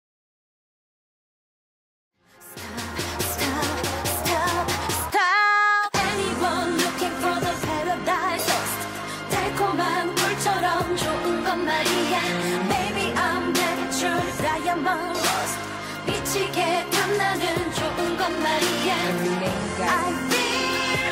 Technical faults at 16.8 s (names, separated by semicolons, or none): none